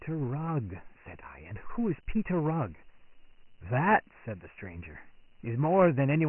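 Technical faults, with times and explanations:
Throughout, Dialogic VOX ADPCM: the speech is bandlimited with nothing above 3 kHz, which fits a 6,000-sample-per-second rate giving about 24 kbps at 4 bits per sample. The OKI-style ADPCM coder predicts each sample and stores only a coarse 4-bit step-adapted difference. The heavy quantisation error rides along with the signal as a gritty, granular hiss that rises and falls with the speech, and the missing upper band leaves it dull and muffled.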